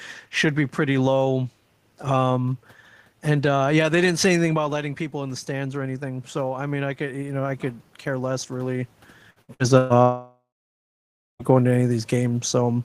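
Automatic gain rising, from 4.57 to 7.49 s, between "they didn't say anything" and "could care less really". Around 4.5 s the talker drifts away from the microphone and the level falls by about 10 dB. The gain control responds slowly, lifting its gain by about 5 dB over nearly three seconds. The voice and the room noise swell back up together instead of snapping to level, so the background can be heard creeping louder.

Repeated packet loss (robotic sound), from 9.30 to 9.93 s, just after "could care less really". Audio goes missing four times in quick succession, with the longest hole 124 ms. Each hole is patched by stretching the last fragment of sound, which covers nearly half of this 0.6-second stretch. The result is choppy, with pieces of the voice clipped out and replaced by repeated texture.

Long network dropout, from 10.02 to 11.42 s, ending just before "going to any". For about 1.4 s nothing real is heard. 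The last sound is first carried on as a fading buzz or hiss, then roughly 0.9 s of near-silence follows. The audio resumes with that part simply gone. This pattern points to a likely stall in the network, where no audio arrived for the receiver to play.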